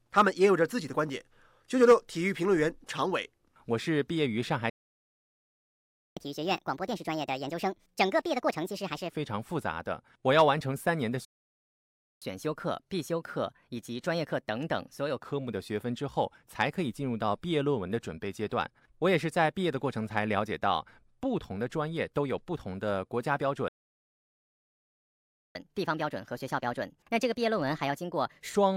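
Speech with three playback stalls: the audio drops to silence from 4.70 to 6.17 s (1.47 s), 11.25 to 12.22 s (0.97 s) and 23.68 to 25.55 s (1.87 s), then resumes, most likely because the player's buffer ran dry or its thread was blocked. Each stall is followed by catch-up at higher speed, where the player resamples its backlog faster and pitch rises with tempo: 6.17 to 9.10 s at 1.5x, about seven semitones up; 12.22 to 15.22 s at 1.15x, about two semitones; 25.55 to 28.55 s at 1.25x, about four semitones, before returning to normal rate.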